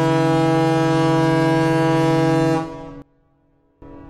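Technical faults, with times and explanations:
3.02–3.82 s: one channel inverted. The sound drops by about 22 dB and turns faint for 0.8 s, with the content common to both channels almost gone, then returns at full level. The likely cause is reversed polarity on one stereo channel, so when the pair is summed to mono, the material common to both channels cancels. What remains is only the small difference between left and right, which is why it sounds faint.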